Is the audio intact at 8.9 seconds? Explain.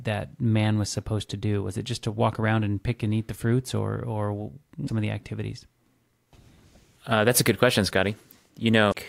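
No. A brief chirp, squawk, click or short hole from 8.90 to 8.95 s comes from damaged data in the compressed stream; the decoder misreads the corrupted frames and loses sync.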